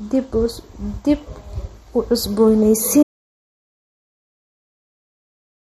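Throughout, the speech carries plainly audible MP3 compression. It sounds watery and smeared, with nothing above 13.8 kHz. This fits a low bitrate, likely near 48 kbps. At 3.03 s an audio dropout to silence begins. Nothing remains, not even room tone, through the end. The input was likely lost.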